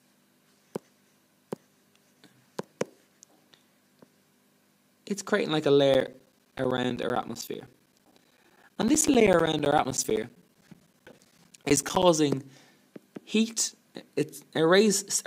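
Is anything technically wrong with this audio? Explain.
Yes. From 5.94 to 12.03 s there are periodic USB or driver dropouts. Every 64 ms something briefly stalls the audio path, and about 10 ms goes missing each time, replaced with silence. The result is a steady ticking under the signal. On the waveform these show as evenly spaced flat gaps, and on a spectrogram as regular thin vertical broadband lines.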